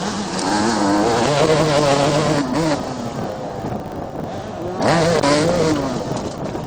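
From start to end, a filter restarted on every block loses its state at each block boundary and begins again from silence. Each restart leaves a small transient, repeating at 50 Hz, which points to blocks about 20 ms long. Unlike steady mains hum, this buzz rises and falls with the sound's level and fades in quiet passages.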